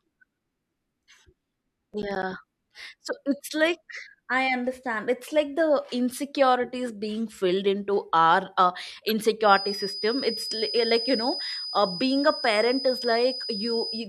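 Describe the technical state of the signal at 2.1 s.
Processor overload crackle runs from 1.94 to 2.23 s: missed deadlines on buffers of around 10 ms leave a few hard-edged silent gaps, heard as gritty crackle.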